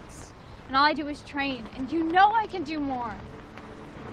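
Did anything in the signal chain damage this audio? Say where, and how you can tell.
No, nothing stood out on listening that would point to damage at any stage of the signal chain.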